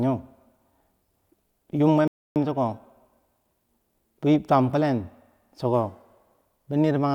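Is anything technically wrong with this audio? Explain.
Yes, two playback faults interrupt the speech.

Overlap between stream segments at 1.27 s: the timestamps of two adjoining segments, which fits roughly 2-second segments, claim the same stretch of time, so the player trims audio that was never actually duplicated. A few milliseconds vanish and the waveform jumps, heard as a tiny skip.

Playback stall from 2.08 to 2.36 s: the speech cuts to silence mid-flow for about 280 ms before continuing. The likely cause is the player running short of data or its audio thread being blocked, leaving the output empty until it recovered.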